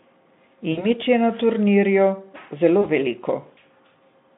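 At 0.71 to 0.86 s and 2.81 to 2.88 s, VoIP packet loss is concealed by the speech codec: the decoder extrapolates buzzy, fading sound over gaps of about 60 and 20 ms.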